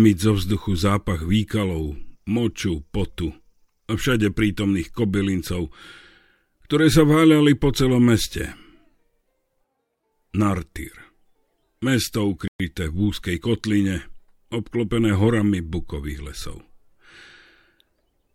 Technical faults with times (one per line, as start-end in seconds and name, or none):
12.48-12.60 playback stall